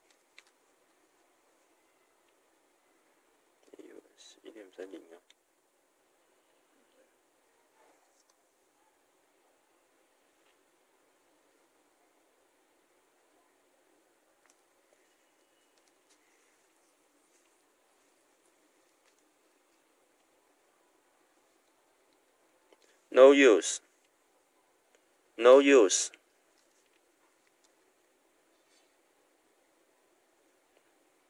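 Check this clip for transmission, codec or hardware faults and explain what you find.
No faults can be heard anywhere in this audio. Nothing in the sound suggests a problem along its path from source to listener.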